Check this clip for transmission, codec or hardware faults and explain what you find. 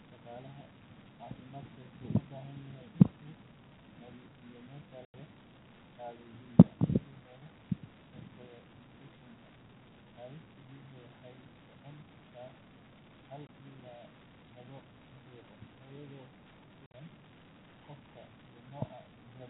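The clip has one transmission fault: packet loss filled with silence. It sits on a G.711 telephone line band of about 150 Hz to 3.6 kHz. Gaps occur at 5.05 s after "nadiifiyo meesha" (90 ms), 13.47 s (20 ms), and 16.87 s (70 ms spread over 80 ms). Lost packets were replaced by silence. The lengths fit 10 ms packets. Each hole cuts the sound abruptly, with hard edges.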